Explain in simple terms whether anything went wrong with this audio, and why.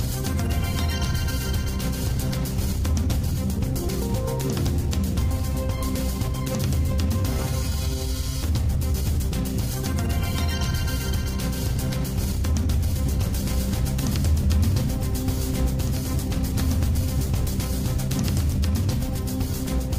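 The audio was likely picked up twice, once by a slower path, creating a doubled audio track. From 13.1 to 18.5 seconds, a quieter copy of the sound plays about two seconds behind the original, switching on and off abruptly, with no echo-like fade.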